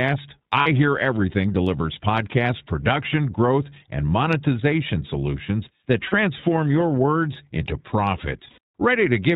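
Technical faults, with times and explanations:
Throughout: iLBC codec. The speech is band-limited to nothing above 4 kHz and has a plainly audible rough, slightly synthetic texture, which fits a narrowband codec coding each 20 ms frame independently, at a rate consistent with 15.2 kbps.
0.60 to 0.67 s, 6.08 to 6.14 s (between "and monetization solutions that" and "your words into"), 8.50 to 8.58 s: lost iLBC frames. Gaps of 60, 40 and 80 ms are filled by a repeated pitch cycle mixed with noise, heard as a held, buzzy vowel, and the voice is right again almost at once afterwards.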